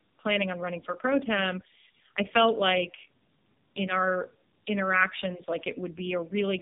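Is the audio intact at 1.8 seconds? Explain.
No. Tandem speech coding affects 1.8 s as it does the whole clip: the speech passed through a G.729A coder, then a G.711 link, then AMR-NB, so the second speech codec re-encoded already degraded audio. The result sounds rough, muffled and warbly, with nothing above 3.7 kHz.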